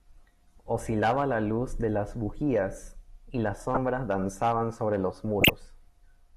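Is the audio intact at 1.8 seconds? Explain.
Yes, the audio is intact at 1.8 seconds, with no dropout, click, distortion or other fault at that moment.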